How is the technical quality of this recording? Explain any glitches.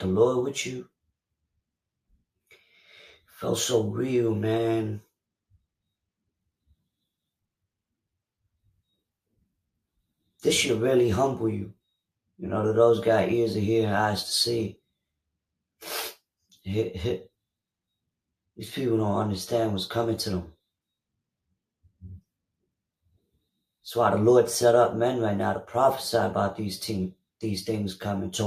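No glitches turn up anywhere in the recording, and the signal stays technically intact throughout.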